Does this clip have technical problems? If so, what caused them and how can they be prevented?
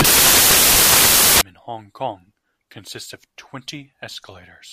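Yes. Samples built from the wrong bytes, 0 to 1.41 s: the reader misassembles each sample, so noisy low bits become dominant and the speech turns into loud, harsh broadband noise. Prevent it by checking byte order, alignment and sample format against the file header before decoding.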